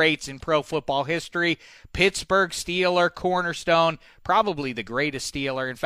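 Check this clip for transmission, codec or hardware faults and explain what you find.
No faults heard; nothing in the audio needs flagging.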